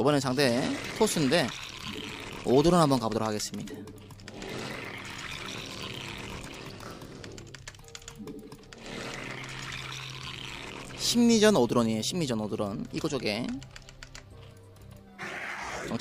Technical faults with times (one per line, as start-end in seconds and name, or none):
none